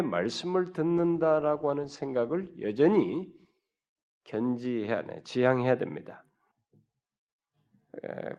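From 0.99 to 6.51 s, a call bitrate drop cut the encoder from 64 to 14 kbps, coarsening the coding and narrowing the band from 20 kHz to 12 kHz.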